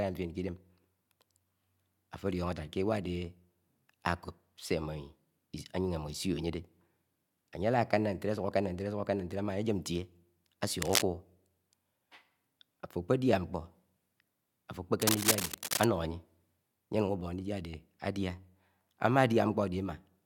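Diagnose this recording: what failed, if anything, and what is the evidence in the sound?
Two bursts of harsh, uneven scratching sit over the speech, a short one from 10.82 to 11.03 s and a longer one from 15.02 to 15.84 s, each roughly as loud as the speech itself. This is cable scratch noise in the analogue wiring, most likely a worn cable, connector or control being disturbed, so its contact resistance jumps erratically and injects dense, irregular noise into the signal for as long as it moves.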